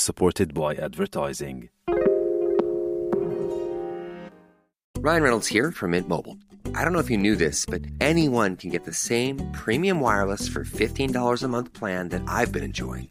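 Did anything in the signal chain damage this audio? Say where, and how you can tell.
Yes. From 0.58 to 4.32 s the sound turns hollow and phasey, the signature of channel delay (comb filtering) at the buffer stage. One channel arrives roughly 5 ms late, which fits a short buffer offset, and summing to mono cancels the shared content at evenly spaced frequencies, with the first notch around 100 Hz. A spectrogram shows fixed dark horizontal bands across that span, and the waveform looks smeared, like a doubled copy.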